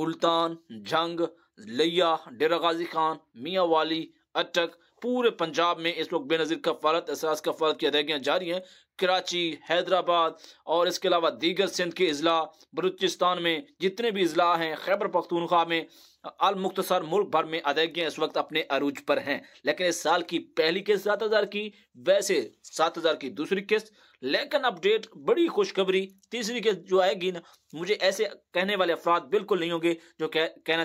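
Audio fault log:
No faults heard anywhere in this recording.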